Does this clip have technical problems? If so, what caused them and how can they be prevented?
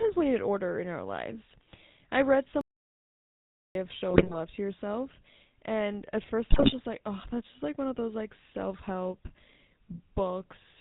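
Yes, three things. The whole clip has that buzzy, gravelly edge of the GSM full-rate codec, and the missing top end above 4 kHz fits the 13 kbps GSM full-rate path. The vocal tract model driven by sparse pulses roughens everything. To prevent it, carry the call over a wideband codec like AMR-WB or EVS instead.

From 2.61 to 3.75 s, right after "our lives I read", the audio goes dead for about 1.1 s and then carries on. That's a playback stall, likely the player starving for data or its thread getting blocked. A larger jitter or playback buffer and a higher-priority audio thread would prevent it.

At 4.10 to 4.34 s, just before "to yourself", and 6.50 to 6.74 s, just before "like oh that's just", there are squawky, gargling bursts. Those are GSM bit errors: corrupted filter, pitch and gain values from a weak radio link, which fits a few percent of bits flipped. Better signal strength or stronger channel coding prevents them.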